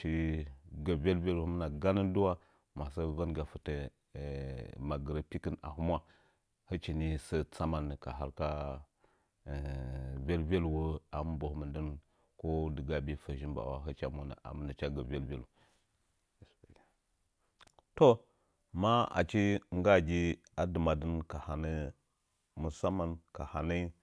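Nothing stood out as a technical problem when listening to the recording.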